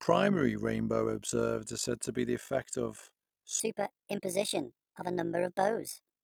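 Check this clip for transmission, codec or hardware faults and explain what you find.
Two faults are present. Throughout the clip there is overlap-add ripple. The speech was split into windowed frames and rejoined with overlaps that do not sum to constant gain. The level therefore pulses by about 11 dB at around 50 Hz, which gives a rough, robotic flutter over everything.

From 3.60 s to 6.24 s, the end of the clip, a section plays at the wrong speed. It runs 1.42 times too fast, which raises pitch by about seven semitones. The likely cause is playback or editing against the wrong clock, so the speech sounds high and hurried.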